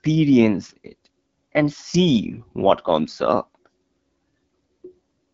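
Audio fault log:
Throughout, AMR wideband (HD Voice) codec: the speech has passed through an AMR-WB coder running at one of its lowest rates; the roughness points to about 8.85 kbit/s. At that rate the pulse-based vocal tract model has too few bits, so the speech turns rough and raspy with plainly audible coding damage. The band from 6.4 kHz upward is synthetic shaped noise rather than real detail, and nothing is present above 7.4 kHz.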